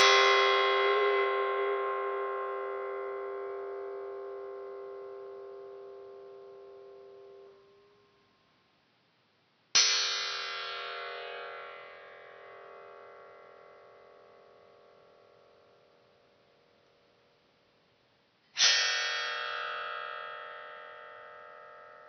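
Nothing here sounds wrong at any point: the sounds just run along without a single technical hiccup to point to.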